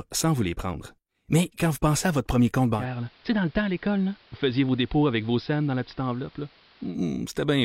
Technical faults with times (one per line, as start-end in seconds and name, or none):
2.72-7.01 digital radio blending to analogue